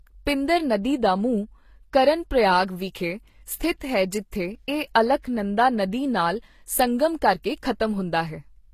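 Throughout the speech, nothing is present above 14.9 kHz, and two layers of coding damage are heard together. This points to likely transcoding between lossy codecs, consistent with Vorbis at 48 kbit/s re-encoded as HE-AAC at 24 kbit/s.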